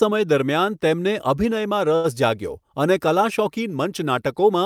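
Speech, with a short stall from a late packet at about 1.95 to 2.06 s: the jitter buffer ran dry, so the receiver held the last sound for about 85 ms, giving a drag with a slight buzz or dip, then carried on from the same spot with nothing lost, just running 85 ms later.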